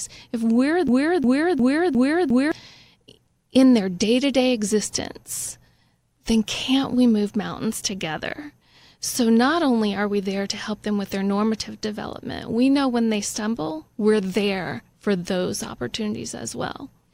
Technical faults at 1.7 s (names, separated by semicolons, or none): broken-record loop